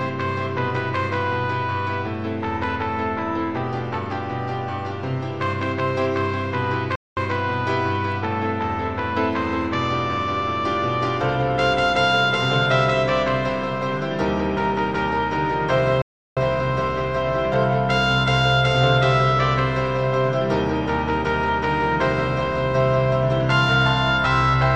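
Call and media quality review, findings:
Playback stall at 6.95–7.17 s (0.21 s) and 16.02–16.37 s (0.35 s). Output drops to silence mid-flow, then resumes. Likely player buffer underrun or blocked audio thread, starving the output until data returns.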